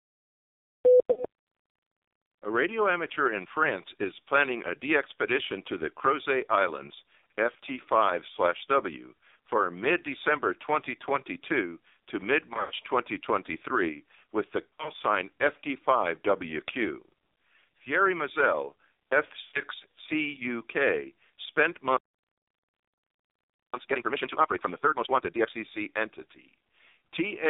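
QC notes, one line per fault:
throughout: AMR narrowband mobile codec. The speech sits in a band of roughly 300 Hz to 3.7 kHz with nothing above, and heavy coding damage: a buzzy, synthetic, reedy quality where the vocal-tract model and sparse pulse excitation fail to capture the real voice. The degree of roughness fits the 5.9 kbps AMR-NB mode. Unlike a plain telephone low-pass filter, the timbre itself is rebuilt and sounds artificial, not merely dull.
1.12–1.25 s, 12.54–12.72 s, 14.67–14.90 s, 19.42–19.63 s: lost AMR speech frames. At 1.12 s, 40 ms of speech becomes a brief warble. The other three each lose about 120 ms. At 12.54 s this is scattered over 160 ms with a 100 ms run, and at 14.67 s over 200 ms with runs up to 60 ms, giving stuttering warbles. At 19.42 s the loss is continuous, so the sound drags out and fades. The decoder repeats the last pitch and vocal-tract settings at falling gain, so each gap holds a smeared, decaying tone rather than true silence, and the voice returns rough.
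21.97–23.74 s: playback stall. The speech stops dead mid-flow for about 1.77 s of complete silence, then resumes. This is not concealment: there is no drawn-out, fading tail and no warble, just an abrupt cut to nothing and a clean restart. The player likely ran out of buffered data or had its output thread blocked. The gap is far longer than any frame-loss dropout in the clip.
23.74–25.50 s: time-compressed catch-up. Right after the stall, the speech runs at twice normal speed for about 1.76 s while keeping its normal pitch. The player is clearing its backlog by cutting out small pieces and cross-fading the joins. Because the pitch stays put, this is distinguishable from a simple fast playback, which would raise the voice. Its placement directly after the silence ties it to the stall.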